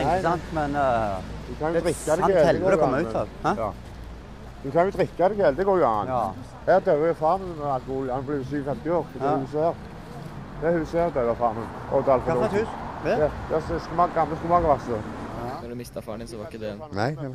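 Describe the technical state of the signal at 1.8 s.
Nothing is wrong with the signal at 1.8 s; it is intact at that point.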